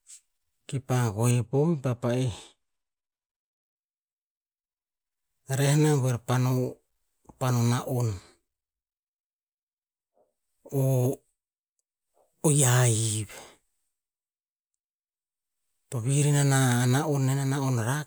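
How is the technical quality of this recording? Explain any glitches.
One glitch stands out in this speech. From 1.31 to 3.76 s, de-emphasis is applied wrongly. A treble cut meant to reverse a high-frequency boost hits audio that never had one, or is applied a second time. The response slopes smoothly downward, about 10 dB lower at 10 kHz than at 1 kHz. That stretch sounds dull and muffled.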